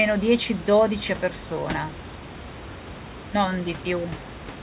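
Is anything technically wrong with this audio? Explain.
No, nothing's wrong here: there's some ordinary room noise about 14 dB below the speech, and the absence of anything above 4 kHz is just how a 64 kbps G.711 A-law call normally sounds.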